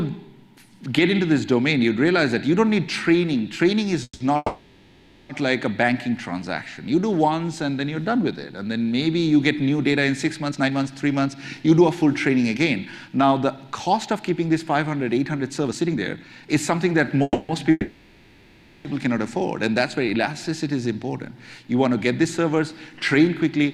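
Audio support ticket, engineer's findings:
Call audio freeze, 4.03–4.22 s: last sound held as fading buzz, ends in about 50 ms of silence, 170 ms gap inserted, nothing lost. Likely packets delayed upstream, jitter buffer underrun, receiver concealment.

Call audio freeze, 4.36–5.31 s: same fading fill, 930 ms, brief silent tail, resumes exactly where it stopped. Likely further delivery stall draining the buffer again.

Jitter buffer speed-up, 10.45–17.16 s: audio runs about 115% speed, pitch unchanged, hurried feel. Buffer held more than its target; receiver trimmed pitch-period-length pieces repeatedly, about a second removed in total to cut latency.

Call audio freeze, 17.23–17.51 s: 260 ms held-and-fading fill, short silence, continuity intact. Likely renewed packet delay, buffer empty.

Call audio freeze, 17.71–18.87 s: longest fill, 1140 ms, fading toward near-silence before audio resumes. 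Likely extended network hold-up, jitter buffer underrun; adds 1140 ms delay.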